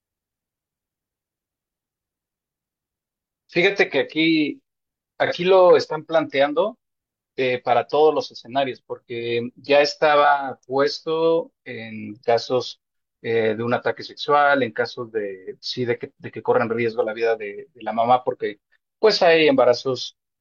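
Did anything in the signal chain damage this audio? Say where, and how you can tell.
Yes. The damage is in the codec stage, as AAC frame loss with concealment. From 5.26 to 5.33 s the speech turns briefly smeared and noisy for about 43 ms, which fits a single lost AAC frame. Because the gap was so short, the decoder did not fade to silence. It synthesised the missing stretch from the last good spectrum with randomised phase, producing a diffuse, phasey patch in place of the real signal before clean decoding resumed.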